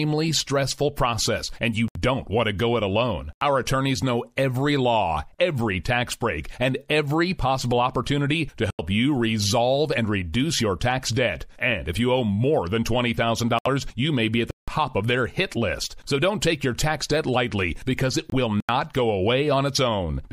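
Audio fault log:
1.88–1.97 s, 13.59–13.67 s, 18.30–18.34 s, Bluetooth dropout: the speech vanishes for about 70 ms between "stressful process and you" and "want to go it", for another 70 ms just before "you may be at", and for about 23 ms at 18.30 s. Speech resumes further on, as if it had kept playing underneath. This is likely wireless audio packets arriving too late and being discarded, with each hole matching one to three lost frames.
3.33–3.41 s, 8.70–8.79 s, 14.51–14.68 s, 18.60–18.69 s, block of digital silence: each gap drops to silence and snaps back with no fade. Three gaps last 85 ms, including the one between "every possible opportunity to" and "you resolve and reduce". The gap at 14.51 s lasts 170 ms. The fixed lengths fit an output buffer of 4096 samples, once doubled, that was not filled in time and went out empty.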